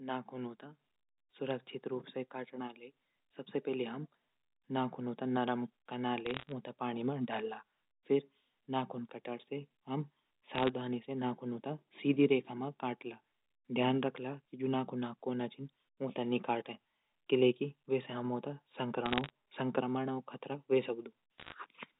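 Bursts of sharp ticking crackle break into this telephone-band speech at 6.26–6.52 s (just before "ऊंथै पाणि मा डंला"), 10.55–10.69 s (before "से नाखूनों तै सीधी"), 19.06–19.30 s and 21.38–21.54 s. These are bit errors on a digital phone line: with under one bit in a hundred flipped, each error corrupts a single logarithmically coded sample, and hits on sign or high bits produce sharp ticks. The speech around them is unchanged, and the 4 kHz band limit fits G.711 A-law coding.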